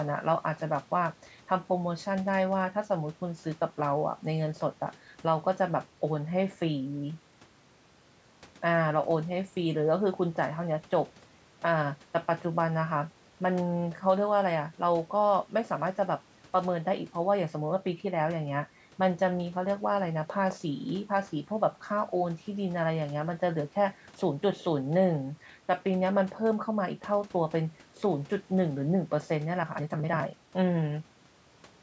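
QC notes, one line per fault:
No faults found in this speech clip. It has passed through call microphone processing, so nothing reaches above 8 kHz and the lowest bass is trimmed away, as expected for that path.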